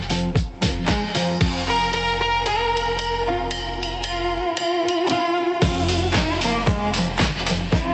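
No technical faults detected.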